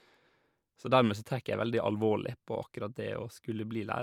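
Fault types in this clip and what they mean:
No technical faults can be heard in the recording. The speech runs without any audible defect from beginning to end.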